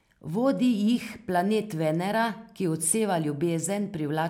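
A short speech recording with no technical fault to report. Nothing in it calls for a time, a value or a cause.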